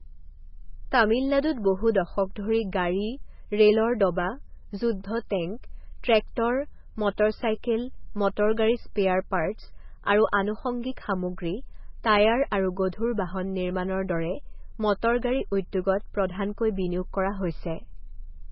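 MP3 compression artefacts run through the whole speech clip. Nothing survives above 5.6 kHz, and the heavy swirly, watery smearing fits a very low bitrate near 16 kbps, likely from an encoder starving weak frequency lines so they flicker between frames.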